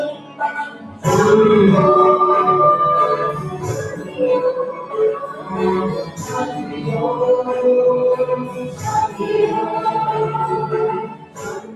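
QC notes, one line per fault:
throughout: noise suppressor applied to music or sounds. A speech-oriented noise suppressor is acting on the whole clip, treating sustained tones, ambience and tails as noise; its gain reduction swings by roughly 15 dB, so level rises and falls with the material rather than with the source.
0.13–1.05, 3.91–4.19, 4.75–4.93, 5.24–5.53, 6.03–6.84, 8.45–9.2, 11.02–11.75 s: sound cut by the noise suppressor. In each span the suppressor classes the sound as noise and pulls it down, by about 7 to 12 dB at the deepest, with the largest drop at the end of the clip; steady or decaying parts sink or are cut short.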